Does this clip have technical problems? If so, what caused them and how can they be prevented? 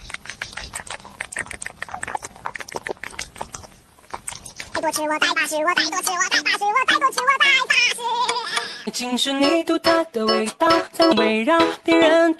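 No, this clip does not have technical problems, so there is nothing to prevent.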